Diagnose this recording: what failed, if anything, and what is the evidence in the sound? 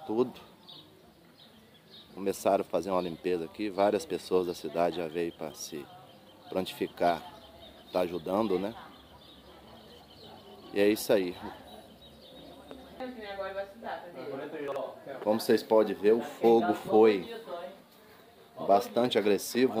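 Chunks out of order at 14.68 to 14.76 s, a buffer or network-jitter fault: two 40 ms chunks play swapped, the late one arriving a single chunk behind its place. Nothing drops out, but the sound jumbles briefly across three hard joins.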